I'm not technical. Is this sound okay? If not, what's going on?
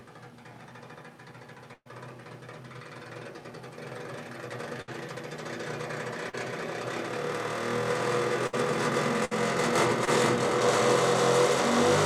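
No. Around 1.73, 4.81, 8.47 and 9.25 seconds, the sound briefly holds or smears, then jumps ahead with a bit missing. That's a burst of packet loss: pieces of audio were lost or arrived too late, so the receiver stretched the last sound to cover gaps of roughly 60 to 120 ms. The first gap also includes a short silence.

At 6.30 and 10.05 seconds there's a quicker wobble, a short concealed packet loss. Tiny pieces of a few hundredths of a second were lost and patched over by continuing the previous sound.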